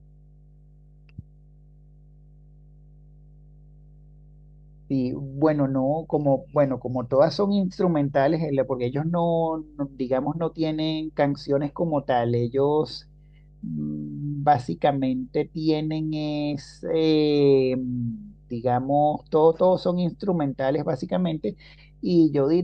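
A ground loop or nearby transformer is leaking the 50 Hz power line into this speech recording, producing mains hum: a steady low tone roughly 30 dB below the voice, present throughout.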